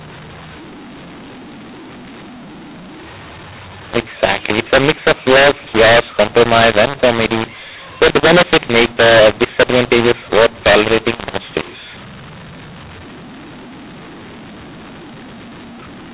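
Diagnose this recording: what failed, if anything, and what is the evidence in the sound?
Codec stage: mu-law and A-law mix-up, A-law bytes read as mu-law, so levels scramble throughout, speech turns harsh and pauses fill with hiss.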